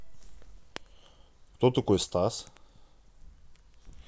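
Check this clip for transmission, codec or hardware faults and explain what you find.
No faults turn up anywhere in the speech. There is no event to place in time or trace back to a cause.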